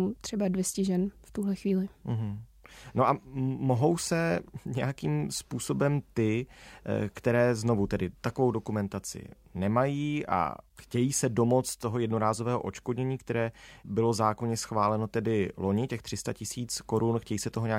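No audible technical faults.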